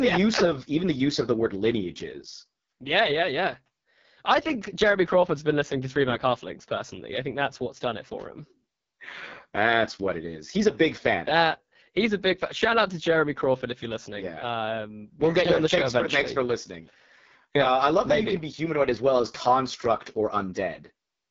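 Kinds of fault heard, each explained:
AMR wideband (HD Voice) codec: The speech sounds rough and raspy throughout, with heavy coding damage and nothing above 7.4 kHz. This fits AMR-WB's lowest 6.6 kbit/s mode, where the pulse-driven vocal tract model has too few bits to rebuild speech cleanly.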